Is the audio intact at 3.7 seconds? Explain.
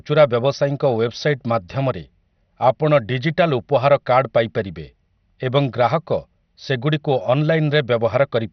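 No. MP2 compression runs through the whole speech clip, 3.7 s included, and is the likely cause of the damage heard there. Layer II coding divides the signal into 32 sub-bands and shares a small bit budget among them. Here that budget shuts off everything above about 6.1 kHz and quantises the remaining bands coarsely, which fits a rate near 48 kbps. The result is dull, muffled speech with a heavy gurgling, granular distortion.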